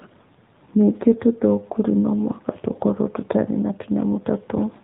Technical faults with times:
0.00-4.84 AMR narrowband mobile codec

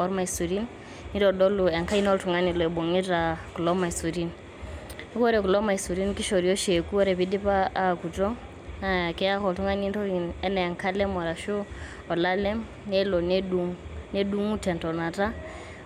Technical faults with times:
none

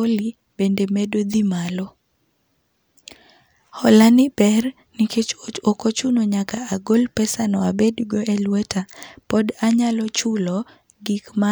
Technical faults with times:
none

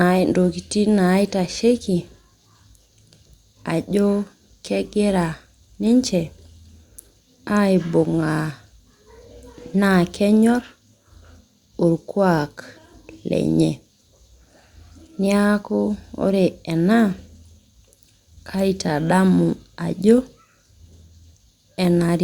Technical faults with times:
none

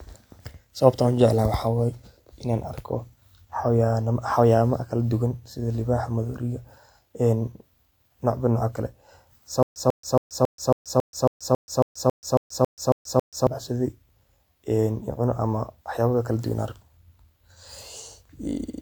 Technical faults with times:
9.63-13.47 stutter with silent gaps

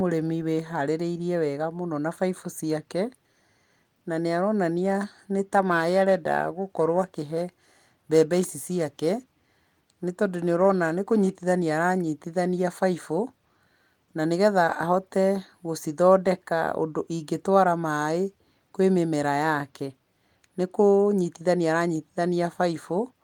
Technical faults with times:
5.45-11.52 periodic clock jitter

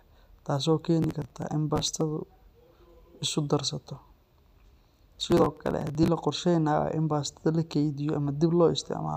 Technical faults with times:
1.02-2.01 processor overload crackle
5.13-6.08 processor overload crackle

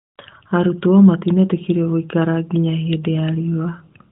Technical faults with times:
none

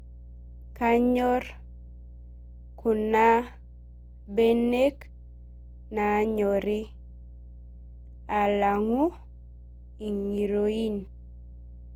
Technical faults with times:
0.00-11.96 mains hum
0.00-11.96 generation loss

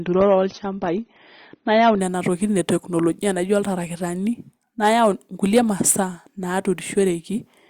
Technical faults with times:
0.00-2.00 adaptive stream starting at a low bitrate

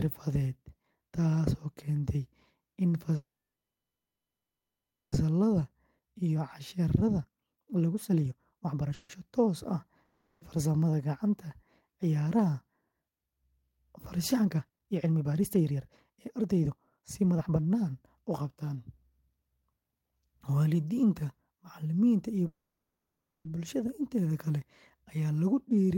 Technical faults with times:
3.15-5.15 call audio freeze
5.61-8.93 jitter buffer speed-up
8.94-9.12 call audio freeze
10.05-10.44 long network dropout
14.34-19.11 jitter buffer speed-up
22.47-23.48 call audio freeze

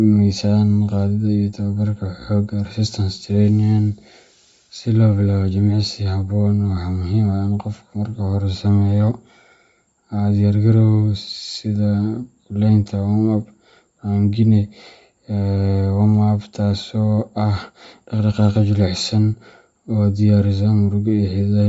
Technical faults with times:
0.00-21.68 Bluetooth LC3 compression

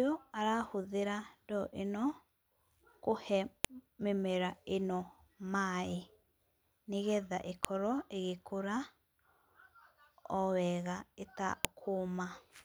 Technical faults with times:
3.65 file header played as audio
7.65 file header played as audio
11.65 file header played as audio

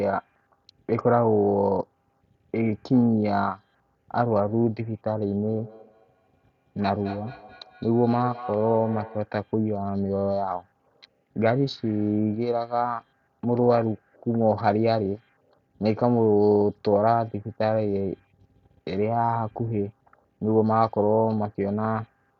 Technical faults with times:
5.48-9.34 feedback echo between two devices

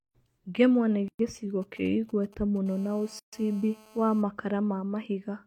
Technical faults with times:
1.08-1.19 gap at a join of encoded pieces
1.62-2.58 GSM signalling bursts
2.66-4.22 GSM phone buzz
3.19-3.33 gap at a join of encoded pieces

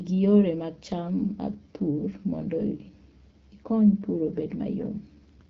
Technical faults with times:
0.00-5.49 AMR wideband (HD Voice) codec

